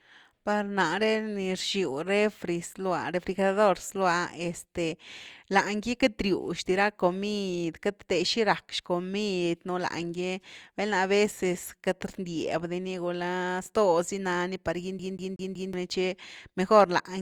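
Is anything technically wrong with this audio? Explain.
Yes. A CD stuck on one turn runs from 14.99 to 15.73 s in this speech clip. A scratch makes the laser jump back one track at the same point on each rotation, so a single slice of about 0.19 s of speech plays four times in a row, with a brief mute at every jump. The result is a fast, evenly spaced stutter, the mechanical repetition of a skipping disc, before playback moves on.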